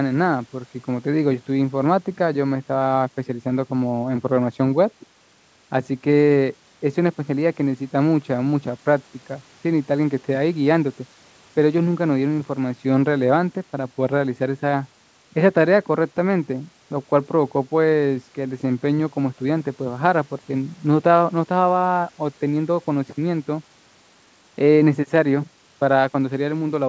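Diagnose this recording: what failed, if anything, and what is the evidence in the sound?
Nothing failed; the speech passes through the call path intact.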